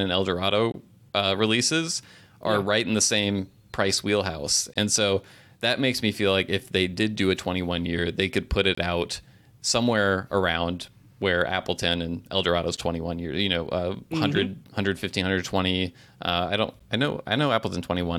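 Brief hard-edged silences of about 10 to 24 ms cut the speech at 0.72, 4.74, 8.75, 12.77 and 16.8 s: gaps between stream segments spaced every 4 s, filled with silence.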